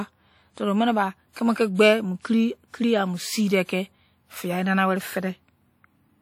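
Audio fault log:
Throughout: WMA compression, likely. The speech has a plainly audible ringing, washy sound, and the hiss swells and fades with the signal. That fits a low-bitrate transform codec.
1.75–1.79 s and 2.21–2.25 s: pre-echo. A short hiss runs for about 42 ms and 34 ms before each sharp attack. The codec spread the loud part's quantisation noise back through its block, which also softens each onset.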